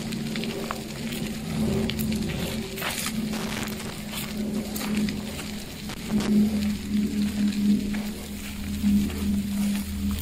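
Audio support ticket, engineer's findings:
Loose connector crackle, 3.33–3.91 s and 5.89–6.29 s: irregular scratchy bursts from a contact intermittently breaking the signal. Unlike buffer dropouts, the bursts are uneven and unevenly spaced. Suspect worn or dirty cable/jack.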